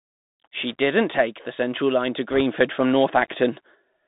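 Bluetooth CVSD headset codec, throughout: the speech passes through a band of roughly 150 Hz to 3.7 kHz, which fits a 64 kbps one-bit delta stream. Its adaptive step lags on loud high sounds, so sibilants turn scratchy and a granular hiss sits under everything.

Bit errors on a Bluetooth voice link, from 2.31 to 2.41 s: flipped bits, around one or two percent, corrupt the delta stream. Each bit carries little weight and errors fade quickly, so instead of clicks there is a brief rushing, crackly noise.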